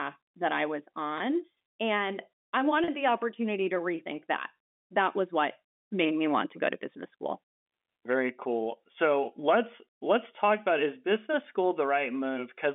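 Speech on a telephone-band line, roughly 250 Hz to 3.5 kHz. Packet loss with pitch repetition causes two brief glitches: a 20 ms one at 1.18 to 1.20 s after "that I was", and a 40 ms one at 2.84 to 2.88 s before "the opportunity to rethink". The receiver repeats the last pitch period, so each sounds briefly held and buzzy.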